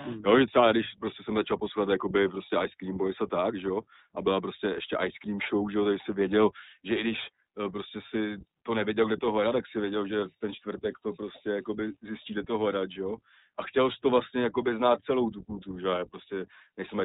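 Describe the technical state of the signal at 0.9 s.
At 0.9 s the speech is passing through the iLBC codec, as it does for the whole clip. The codec cuts the signal into 20 ms frames and codes each frame's excitation on its own, with no carry-over from the frame before, at a rate that fits its 15.2 kbps mode. Everything above 4 kHz is gone, so the sound is narrowband and muffled, and the damage is plainly audible as a rough, synthetic edge on the speech.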